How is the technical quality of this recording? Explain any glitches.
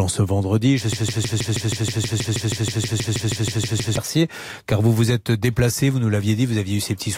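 The recording has one serious glitch. From 0.93 to 3.97 s, a broken-record loop takes over. A 159 ms fragment of speech repeats exactly, back to back, about nineteen times. The likely cause is a stalled player or stream resending its last buffer. The speech meant for those three seconds is lost.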